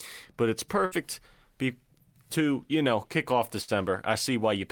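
At 0.85 s, after "but it's", and again at 3.62 s, after "you know kick off", a burst of packet loss leaves about 60 ms of concealed, fading sustain, then skips roughly 60 ms of audio.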